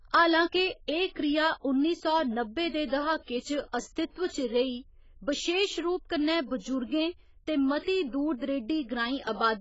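Speech with heavy AAC compression damage all the way through. Nothing comes through above about 7.6 kHz, so it sounds dull, and the sibilants get that smeared, fizzy warble. That's likely AAC-LC squeezed hard, which fits a bitrate of around 16 kbps.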